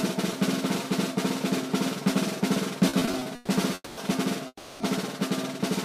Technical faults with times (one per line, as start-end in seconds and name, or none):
2.89-3.50 repeated stalls (stutter)
3.74-3.99 call audio freeze
4.47-4.82 call audio freeze